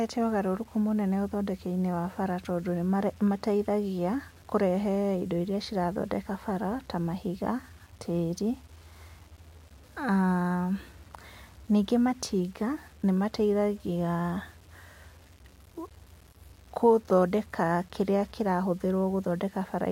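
Speech that sounds grainy and gritty throughout, with the roughness tracking each syllable and quiet tails breaking up into sputter or silence rather than fading. This is likely low bit depth without dither, with coarse rounding error near 35 dB below the signal that fits 8-bit quantisation.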